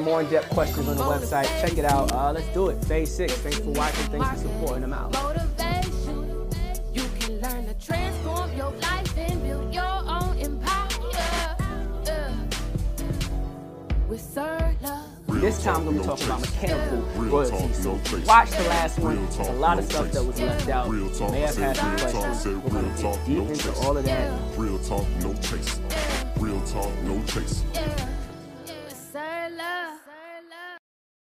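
From 1.88 to 2.16 s, cable scratch noise rustles over the sound, dense uneven broadband bursts about 10 dB below it, likely from a worn connector being moved.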